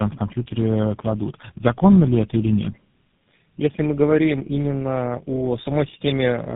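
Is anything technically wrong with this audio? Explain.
Yes. Tandem speech coding runs through the whole clip. The speech crossed several network links, each with its own codec, and was decoded and re-encoded at each border: three low-rate speech coders in a row, two of them GSM full rate and one G.729A, with G.711 links between them. Each coder works on damage the previous one left, so the speech sounds rougher, more muffled and more warbly than any single link would make it, with nothing above 3.8 kHz.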